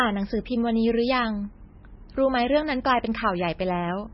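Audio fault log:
Throughout: MP3 compression, heavy damage, nothing above 5.6 kHz, swirly watery speech, likely a very low bitrate near 17 kbps, unlike plain low-pass filtering's clean dullness.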